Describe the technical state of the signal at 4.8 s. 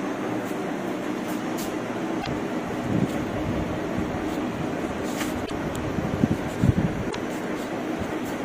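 At 4.8 s the signal is intact, with no dropout, distortion or other technical fault to be heard.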